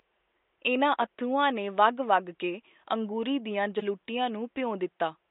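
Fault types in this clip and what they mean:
corrupt frame decoded: at 1.01–1.03 s, just before "ਅੱਥਰੂਆਂ ਨੇ", and 3.79–3.83 s, right after "ਵਗ ਕੇ ਅੰਗੂਰੀ ਦੀਆਂ", damaged compressed data was played anyway, putting energy at the wrong frequencies. The result is short blips spanning one frame, then about two, peaking near -25 and -20 dBFS.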